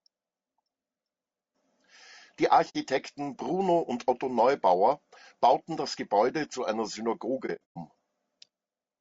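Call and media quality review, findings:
Low-delay AAC compression, whole clip: encoder likely running AAC-ELD at a low rate, sound fits about 32 kbps. Short frames resolve pitch harmonics poorly. Speech plainly rough and grainy, noise between harmonics, thin or synthetic-sounding top band.

AAC frame loss with muting, 2.69 to 2.76 s and 7.46 to 7.77 s: decoder zeroing lost frames' spectra. Overlapping windows fade sound out and back in. Soft-edged gaps. First about 60 ms, fits two frames. Second is 210 ms of scattered dropouts over 300 ms, longest about a tenth of a second.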